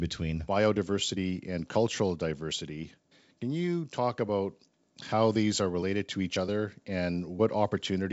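No technical fault can be heard in this speech recording. It passes through G.722 wideband telephone coding at 64 kbit/s, which leaves nothing above about 7.7 kHz and at most faint coding traces.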